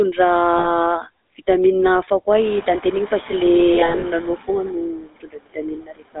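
Speech carried over a GSM full-rate codec, with a buzzy, gravelly roughness on the voice throughout. The band is limited to roughly 250 Hz to 3.6 kHz, which fits a 13 kbit/s full-rate stream. Unlike a generic narrowband filter, the excitation itself sounds coarse and pulse-driven. Noise suppressor artifacts also run through the whole clip. Background noise is pulled down by about 21 dB between phrases and comes back under the voice. That pumping distinguishes it from the steady room noise, which rises at around 2.5 s and stays about 14 dB below the speech. Lost GSM frames appear at 0.58 to 0.67 s as a short metallic, held ring, consistent with about three frames repeated. Between 3.74 and 4.04 s the losses are scattered in brief runs, so the ringing stutters rather than holding once, which separates it from a single dropout. From 4.92 s to the end at 6.2 s, speech cut by the noise suppressor swallows parts of the voice for roughly a second in total, dipping by up to about 22 dB. 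This sounds like faint, swallowed speech rather than the codec's metallic hold.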